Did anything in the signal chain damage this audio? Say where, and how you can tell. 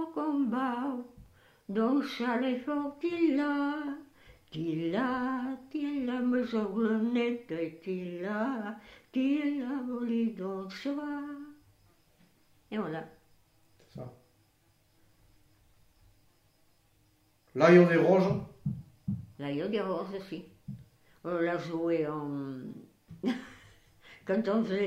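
No, nothing in the chain damaged it.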